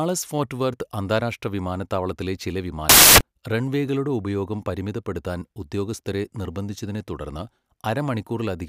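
Right after "വർത്ത് അന്താരാഷ്ട്ര വിമാനത്താവളത്തിലെ ചില", from 2.89 to 3.21 s, the speech turns into loud, harsh broadband noise: samples built from the wrong bytes. The reader misassembled each sample, so the jittery low bits became the big part of each value. It clears before "റൺവേകളുടെ ഉപയോഗം പരിമിതപ്പെടുത്താൻ ഉദ്യോഗസ്ഥരെ".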